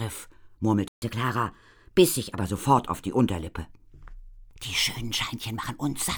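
At 0.88 s the sound cuts to silence for about 139 ms, then resumes where it left off. This playback stall, likely a starved buffer or blocked player thread, differs from a dropout because nothing is skipped. From 1.02 to 2.41 s, catch-up at higher speed runs the backlog at 1.1 times normal, lifting pitch roughly a semitone and a half before it settles, unlike a steady pitch error.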